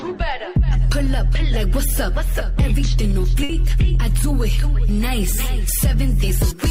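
At 3.43 s a burst of packet loss hits: roughly 60 ms of consecutive audio never arrived in time, so the receiver stretched the last sound and faded it out until 3.51 s. The result is a brief held sound that dims, then a jump ahead past the missing stretch.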